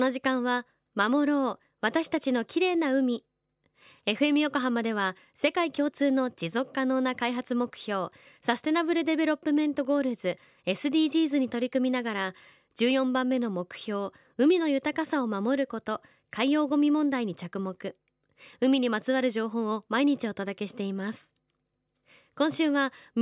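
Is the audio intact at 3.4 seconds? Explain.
Yes, the speech is intact at 3.4 seconds, with no dropout, distortion or other fault at that moment.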